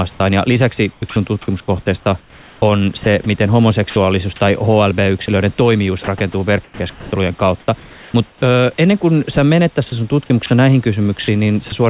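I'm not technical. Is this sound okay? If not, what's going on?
No. The speech is choppy from 0.1 to 3.96 s, 5.26 to 8.42 s (just before "ennen kuin sä menet") and 9.9 to 11.72 s (just after it). Quiet bits drop out and get swapped for a soft fake hiss. That's likely sound chopped by the voice detector on the sending end.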